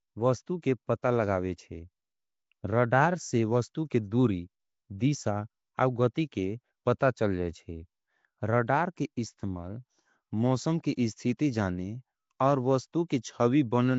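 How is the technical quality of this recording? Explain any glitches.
Technical quality is poor, with audible coding damage throughout the speech and four short glitches.

Throughout, the speech has a rough, hissy, underwater smear and nothing above 7.7 kHz, likely Nellymoser compression at a low rate near 32 kbps; a spectrogram shows a hard ceiling and noisy, patchy bands.

At 6.14, 6.99, 10.96 and 13.09 s, pre-echo puts a 14 to 18 ms hiss just before sharp onsets. Coding noise spreads backward across the block, showing as smears ahead of each attack.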